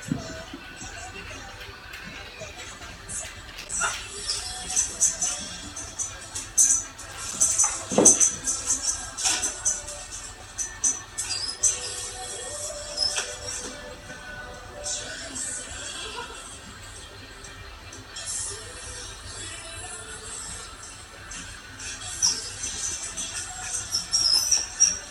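Loose connector crackle at 3.48 to 3.72 s and 7.11 to 7.53 s: a worn contact making and breaking chops the signal into irregular bursts of scratchy crackle.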